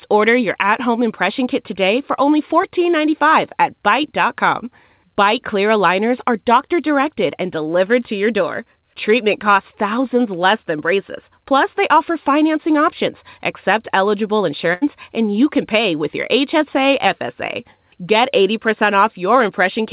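At 2.62 to 2.65 s, just after "kit today for only", there is short concealed packet loss: audio failed to reach the decoder in time, so the receiver extended the preceding sound for about 14 ms before rejoining, leaving 20 ms absent and a brief smear in the speech.

At 14.73 to 14.83 s, after "financing options accept eligible", a burst of packet loss drops about 80 ms. Concealment stretches the last sound and turns it down as the gap goes on, then the speech resumes at "and you can pay" with the intervening part gone. Throughout, the call path's band limit leaves nothing above 4 kHz, which fits G.711 A-law at 64 kbps.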